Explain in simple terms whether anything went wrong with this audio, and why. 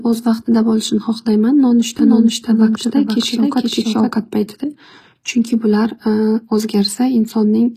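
Two things stand out. Throughout, the treble sounds artificial and grainy, likely from HE-AAC compression, which keeps the lows and fakes the highs by copying lower sounds upward. From 1.99 to 4.13 s there's a doubled audio track: a quieter copy about half a second behind, likely from the audio being captured twice, cutting in and out abruptly.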